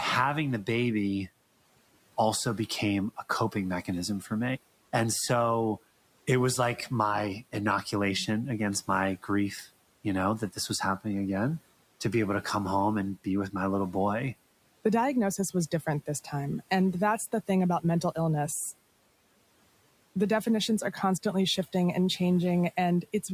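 At 4.21 to 4.31 s, just after "became a coping mechanism", the noise suppressor cuts speech. It mistakes part of the speech for noise. For about a tenth of a second, the level drops by up to about 8 dB, so that moment sounds swallowed.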